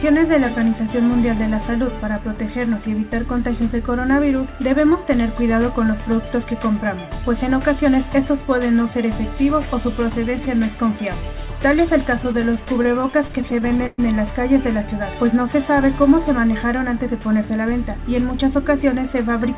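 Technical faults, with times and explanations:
12.24–14.01 s, repeated stalls (stutter): the sound catches and drags in 20 short hitches, the longest about 115 ms, with roughly 0.3 s filled in overall. Late-arriving packets kept emptying the jitter buffer, and each gap was bridged by extending the last sound.
16.28–17.50 s, jitter buffer speed-up: the sound runs noticeably hurried, about 7% fast, yet keeps its pitch. With a backlog of queued audio, the receiver trimmed tiny pitch-period slices over and over, shaving off around a tenth of a second.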